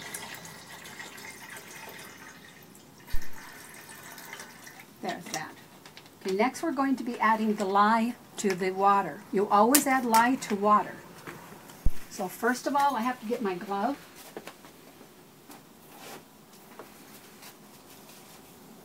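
At 3.14 s a deep phantom power thump appears, peaking at about -14 dBFS and decaying in 65 ms. A second, louder thump follows at 11.86 s, about -10 dBFS, dying in 46 ms. Each is a supply switching on or off on a live input, its voltage step pushed through the coupling capacitors.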